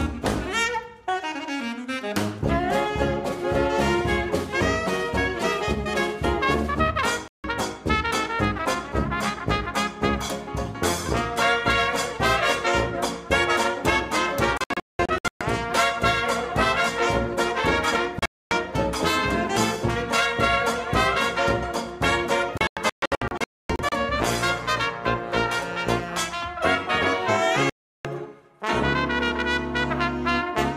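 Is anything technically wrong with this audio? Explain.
Yes. Digital broadcast dropouts occur at 7.28–7.44 s, 14.58–15.41 s, 18.19–18.52 s, 22.58–23.92 s and 27.70–28.05 s. Corrupted or missing frames forced the receiver to mute, leaving the audio broken by silences. The middle three dropouts are clusters of short holes.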